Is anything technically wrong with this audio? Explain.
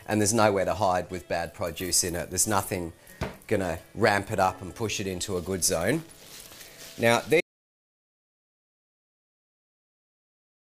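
Yes. At 7.41 s the audio shows an audio dropout to silence that lasts to the end. The sound cuts off mid-flow and no room tone remains. The input was likely lost through a disconnected device, failed link or stray mute while recording continued.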